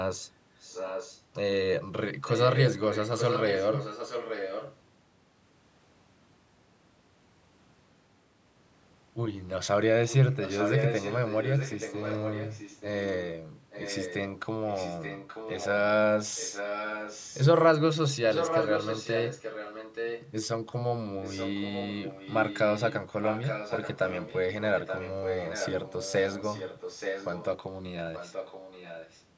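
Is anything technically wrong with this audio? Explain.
Yes. There is echo leak at 0.6–1.22 s, 2.23–4.76 s, 10.08–15.68 s, 16.36–17.41 s, 18.3–20.31 s, 21.22–27.45 s and 28.14–29.24 s. In each stretch a copy of the speech returns 878 ms late, usually about 10 dB below it. It is loudest at 18.3–20.31 s, about 5 dB down, and faintest at the end, about 15 dB down. The likely cause is a loudspeaker on the far side whose echo canceller let its microphone's pickup through and sent it back.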